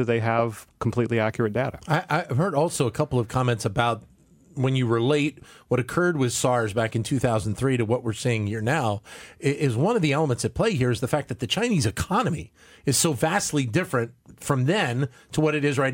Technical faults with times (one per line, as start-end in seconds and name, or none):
none